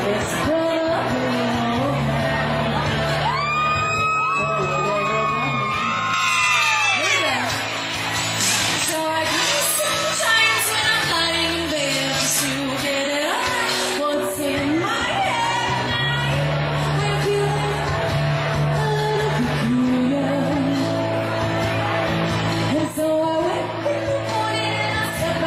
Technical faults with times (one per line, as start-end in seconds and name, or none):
6.14-14.14 pre-emphasis left on